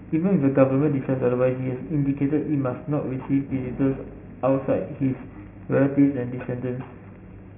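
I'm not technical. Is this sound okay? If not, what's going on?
No. Throughout, the speech was converted from 16 kHz to 6 kHz without filtering, causing aliasing: sound above 3 kHz folds back as gritty, metallic false tones.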